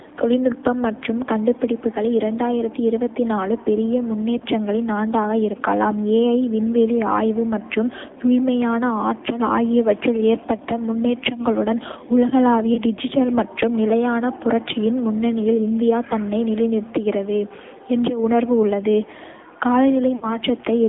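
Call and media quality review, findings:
AMR narrowband mobile codec, whole clip: speech band-limited to roughly 250 Hz to 3.6 kHz, buzzy and synthetic. Sound points to a low AMR-NB mode near 7.4 kbit/s. Spectrogram: hard ceiling below 4 kHz, smeared harmonics from pulse-excited vocal-tract modelling.

Lost AMR speech frames: brief warble/dip at 4.38–4.42 s before "ஆண்டாக இருக்கலாம் விண்வெளி ஆய்வு" and at 12.74–12.80 s before "டிஜிட்டல் மற்றும் நிலையான புரட்சியின்", each fitting one 20 ms frame. At 20.16–20.27 s, about 60 ms, drawn out and fading. Decoder concealment repeats the last parameters at decaying gain. Waveform: amplitude sag. Spectrogram: frozen, stretched harmonics.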